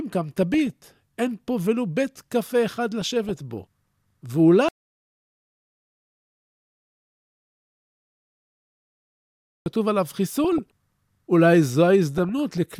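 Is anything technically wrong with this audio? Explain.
Yes. DAB burbling appears at 0.43–0.91, 3.01–3.64, 10.44–10.59 and 12.18–12.58 s. Weak reception lets bit errors corrupt sub-band data, causing noise blips and level jumps in sub-bands over the speech. An audio dropout to silence runs from 4.69 to 9.66 s. For about 5 s there is dead silence with no room tone, likely from lost input.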